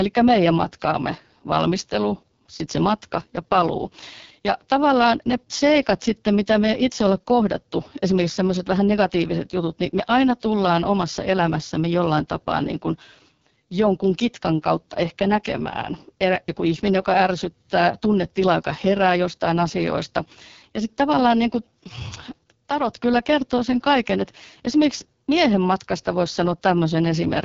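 From the first second to the last, the speech has the rough, raspy quality of an AMR wideband (HD Voice) codec pushed down to its lowest rate. The damage is heavy and sounds like roughly 6.6 kbit/s. At that rate the pulse-driven vocal tract model has too few bits to track the voice properly, so it comes out gritty and buzzy. Nothing at all gets through above about 7.3 kHz.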